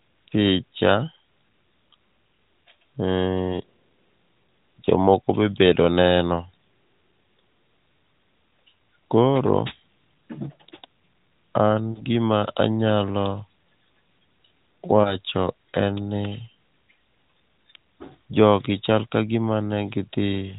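At 11.92 to 12.03 s and 15.02 to 15.17 s, lost AMR speech frames cause brief warbling dips rather than silent gaps or clicks, which fits a single concealed 20 ms frame each time.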